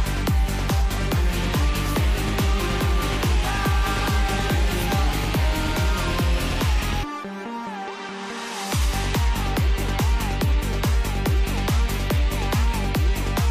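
Nothing stood out as a technical problem on listening to the audio.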